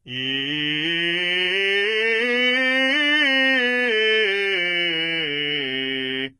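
From start to finish the music carries heavy HE-AAC compression damage, likely from a very low-bitrate encode in the region of 16 kbps. The lower spectrum is coded directly, and the treble is synthesised by copying lower bands upward under a coarse envelope, with nothing present above 11.5 kHz. The top end sounds bright but false: harmonics fail to line up across the crossover, so cymbals and sibilant detail come out gritty and metallic.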